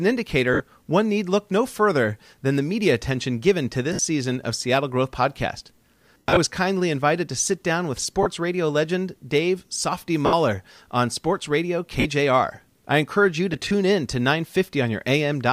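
A speech recording with lost LE Audio frames: short dropouts at 0.54 (just before "one need look no"), 3.93, 6.15–6.37 (scattered over about 0.22 s, longest run around a tenth of a second), 8.23 (between "to sit down with" and "radio legend"), 10.26, 12.00 and 13.53–13.71 s (scattered breaks after "I encourage you to", before "in to"). Each gap lasts 30–170 ms, which fits 10 ms frames. The LC3 decoder concealed them by repeating the last spectrum with scrambled phase. The voice turns into a brief hissy smear, fading on the longer losses. A spectrogram shows harmonics dissolving into diffuse noise bands, and the waveform shows small noise-like patches that shrink in amplitude.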